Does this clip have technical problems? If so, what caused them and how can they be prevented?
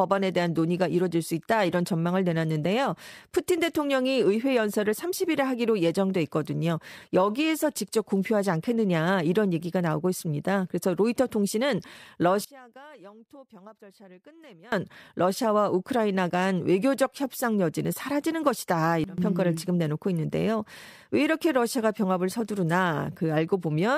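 Yes. The speech has two sudden gain jumps, likely from a digital gain setting applied between one sample and the next with no ramp. At 12.45 s the level drops by about 24 dB and stays down until 14.72 s. At 19.04 s it drops by about 17 dB for a brief 0.14 s dip ending at 19.18 s. The background noise falls and returns along with the speech. Ramping every gain change over a few milliseconds would prevent this.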